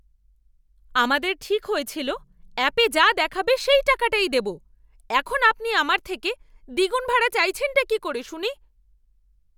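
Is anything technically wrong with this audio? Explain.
No, nothing technically wrong can be heard here.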